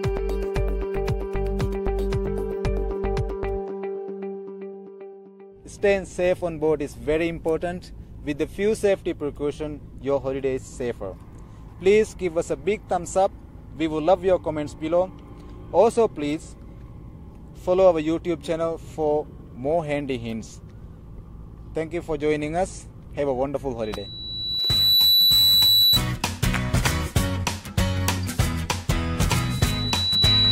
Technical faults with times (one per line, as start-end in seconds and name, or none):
23.82-26.00 loudspeaker feedback squeal
29.32-30.51 loudspeaker feedback squeal